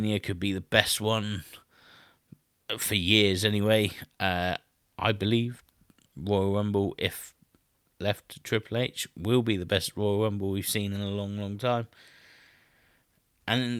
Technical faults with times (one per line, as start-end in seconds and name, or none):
none